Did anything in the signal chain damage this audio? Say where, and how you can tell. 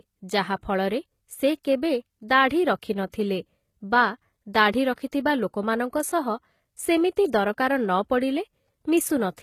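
Yes, at the codec stage. Throughout, the sibilants sound gritty and lispy and nothing reaches above 14.9 kHz, likely HE-AAC compression at a bitrate around 20 kbps, rebuilding treble from copied lower bands.

Pre-echo, also from the codec: short hiss smears ahead of attacks at 3.10–3.14 s, 4.94–4.98 s and 5.12 s, where block-wide quantisation noise spills into the quiet just before each onset.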